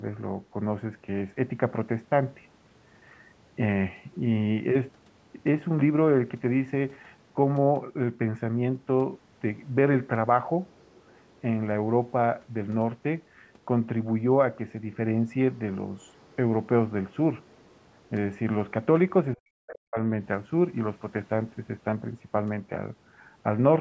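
Other side's voice leaking through appears faintly in this speech recording at 10.71–11.2 s, 11.36–11.4 s, 15.97–16.36 s, 17.45–17.76 s and more noticeably at 19.72–19.78 s, likely because the echo canceller left residual loudspeaker playback in the microphone signal. Speech suppressed in double talk occurs at 19.36–19.98 s, where the talker's level falls very deeply for about half a second, likely because the echo canceller could not separate the talker from the overlapping echo and attenuated both.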